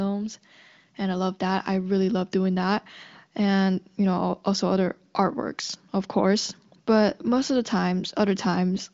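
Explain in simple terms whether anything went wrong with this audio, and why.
Nothing went wrong here.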